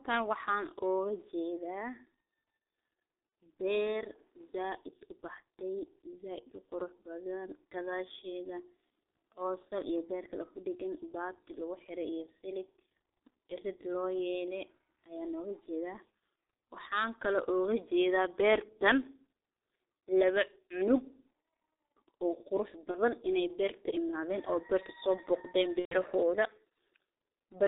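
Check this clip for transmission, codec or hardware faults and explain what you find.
Two faults are present: heavy G.723.1 codec damage across the whole speech clip, and three short episodes of VoIP packet loss concealed by the speech codec.

The G.723.1 codec is audible throughout. Nothing reaches above 4 kHz, and the muffled, hoarse texture fits its 6.3 kbit/s mode. Its 30 ms frames update the vocal-tract model slowly, so consonants smear into neighbouring sounds. A plain low-pass filter would dull the top end but leave consonant timing crisp. Here the damage is the coarse, grainy roughness of a very low-rate model.

VoIP packet loss concealed by the speech codec occurs at 3.29 to 3.32 s, 22.91 to 22.97 s, and 25.80 to 25.95 s. When packets went missing, the decoder kept extrapolating from its last pitch and filter while lowering the gain. The first two episodes fit one lost 30 ms frame each. 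The last fits about four frames, roughly 120 ms, and is heard as stretched sound fading away, then muted from the third lost frame. Unlike a dropout, the sound smears on before going quiet, and then recovers weakly.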